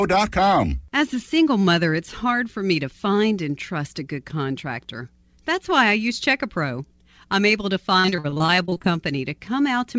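From 8.00 to 8.86 s the speech suffers repeated packet loss (robotic sound): fifteen short dropouts, longest about 41 ms, concealed by extending prior audio, giving choppy speech.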